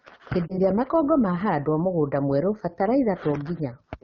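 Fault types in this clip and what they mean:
AMR wideband (HD Voice) codec: the speech is coded at a low rate, near 8.85 kbit/s, and sounds plainly rough and raspy throughout, with the upper band filled by shaped noise.
Lost AMR speech frames: a single 20 ms frame fails around 0.48 s, and the decoder fills it from the previous frame, leaving a brief dip or warble.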